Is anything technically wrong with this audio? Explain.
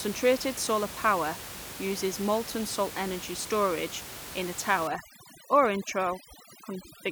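Yes. From 4.87 s to the end at 7.11 s there's overdone noise removal. The reducer is pushing individual frequency bands right down whenever they sit near its noise estimate, taking quiet parts of the speech with them. The background room noise, about 13 dB below the speech, drops and breaks up into twinkling specks.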